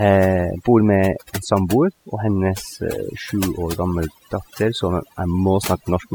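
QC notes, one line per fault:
Throughout: overdone noise removal. The noise reduction was pushed too hard, muting any frequency band close to its noise estimate, so the background drops and breaks up into twinkling specks and quieter speech detail is lost. Unlike plain gating, the dropouts are per band, not whole-signal.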